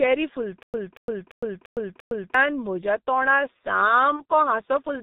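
The whole clip is coded with the G.723.1 codec, and the damage is heavy. The sound points to its low 6.3 kbit/s mode. Nothing above 4 kHz survives, so the speech is muffled. The codec works in 30 ms frames and updates its model of the voice slowly. That gives a hoarse, rough quality. Consonants lose their edges and blur together.

From 0.63 to 2.34 s there is a stutter with silent gaps. A short burst of about 0.23 s plays, then about 0.11 s of dead silence follows. The same burst returns every 0.34 s, five times over. The playback likely stalled and replayed its last fragment at each retry before running empty. The audio that belonged in this stretch never arrives.

From 4.17 to 4.23 s comes VoIP packet loss concealed by the speech codec. About 30 ms of audio went missing, which fits a single lost 30 ms frame. The decoder filled the hole by extending the last pitch and vocal shape it had. 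The result is a brief stretched, fading sound in place of real speech. Because each frame builds on the one before, the sound stays weak or distorted just after the gap.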